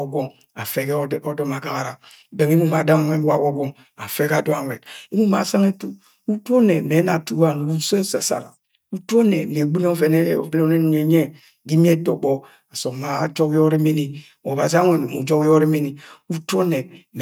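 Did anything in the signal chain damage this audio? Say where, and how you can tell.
No, nothing along the signal chain has left an audible mark on this speech recording. At no stage does the sound break, change character or lose anything, so there is no damage to trace to a cause.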